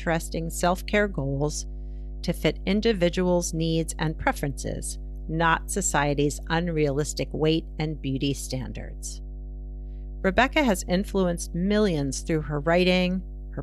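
Mains hum runs from start to finish beneath this speech recording, a steady low tone at 50 Hz sitting roughly 10 dB below the level of the speech. Its constant pitch and presence through every pause point to the 50 Hz power line leaking into the signal path, through either a ground loop between connected equipment or magnetic coupling from a nearby transformer.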